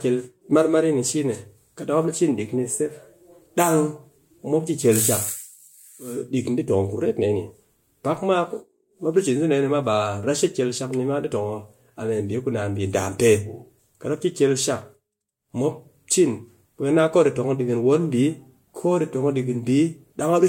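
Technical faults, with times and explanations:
No technical faults detected.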